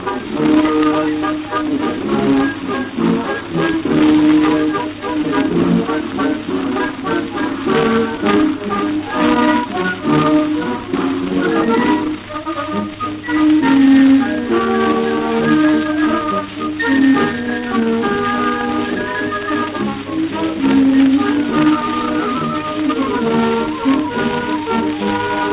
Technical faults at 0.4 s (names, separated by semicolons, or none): none